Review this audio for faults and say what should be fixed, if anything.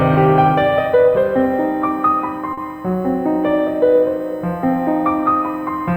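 A USB whine runs under the music for the whole clip: a steady tone built on 1 kHz, loudest at its 2 kHz harmonic, sitting roughly 40 dB below the music. The interface's bus traffic comes in 1 ms frames, and its current draw pulses at that rate and leaks into the audio through shared power or ground. Mains hum sits at 50 or 60 Hz and its multiples, so a 1 kHz-based pitch points to the USB bus instead. Powering the interface separately or breaking the ground loop with an isolator should remove it.

At 2.53 to 2.59 s there is a short stall from a late packet. The music briefly hangs, with the sound held about 40 ms too long, and then carries on from exactly where it stopped. A packet arrived after its playback deadline, the jitter buffer ran dry, and the receiver stretched the last audio to cover the wait. This differs from a lost packet because none of the music is skipped, and the timing simply shifts later by 40 ms. 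A deeper or adaptive jitter buffer would absorb a delay of this size.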